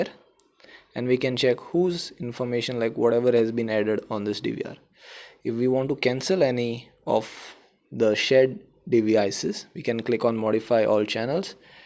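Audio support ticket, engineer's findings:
No audible faults found on review; nothing to attribute to any component, no action required.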